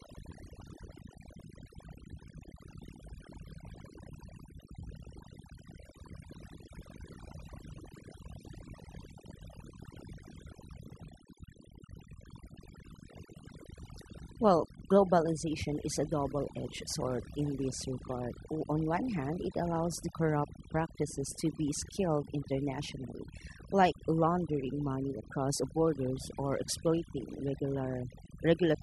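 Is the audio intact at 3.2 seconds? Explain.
No. Overdone noise removal, present throughout, strips bands near the noise floor, leaving near-silent gaps with twinkling specks; a spectrogram shows scattered isolated bins.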